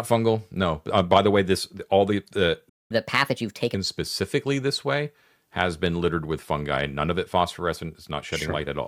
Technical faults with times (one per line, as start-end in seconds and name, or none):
2.69-2.91 playback stall
2.91-3.75 catch-up at higher speed